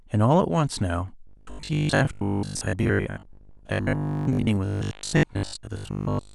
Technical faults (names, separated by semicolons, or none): robotic sound from repeated short buffers